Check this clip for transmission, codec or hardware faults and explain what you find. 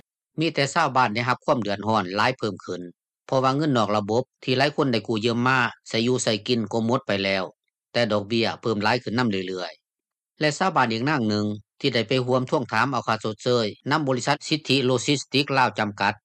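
Nothing stood out on listening to the clip.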